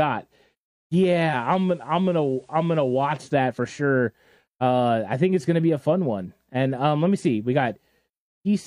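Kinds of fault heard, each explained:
Digital radio blending to analogue: from 1.25 to 3.17 s, starting just before "that for sure", faint hiss rises and the level dips about 2 dB, because the receiver lost its digital stream and cross-faded, over 121 ms, to the station's FM broadcast, then back.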